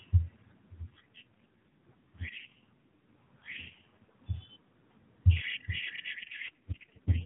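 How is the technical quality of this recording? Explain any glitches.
The speech comes through an AMR narrowband mobile codec, cut off above 4 kHz, and contains two AMR rate drops. From 0.84 to 4.22 s and from 6.12 s to the end, the voice turns buzzier and more synthetic. This fits a weak link forcing 12.2 down to 4.75 kbps. Unlike a dropout, there's no gap or band change.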